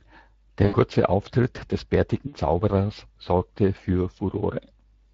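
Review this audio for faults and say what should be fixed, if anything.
The whole speech clip carries Speex codec damage that is plainly audible. This CELP coder rebuilds the voice from a pitch predictor and a spectral filter with a coarsely quantised excitation, so the speech sounds grainy and hoarse rather than clean. The degree of roughness fits a bitrate around 20 kbps. To prevent it, encode with a higher Speex quality setting or switch to a modern codec such as Opus at a comparable or higher rate.

VoIP packet loss concealed by the speech codec occurs from 0.65 to 0.75 s and again from 2.27 to 2.37 s. The first gap is about 80 ms and fits four lost 20 ms frames. The second is about 60 ms and fits three. In each gap the decoder keeps extending its last pitch and filter state while reducing the gain, so the speech smears into a fading buzzy tone or coloured noise. It then takes some tens of milliseconds to recover once real packets arrive again. 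To prevent it, reduce loss on the network path and add forward error correction or a larger jitter buffer.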